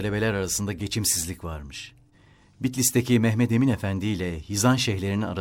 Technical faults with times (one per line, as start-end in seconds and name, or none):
none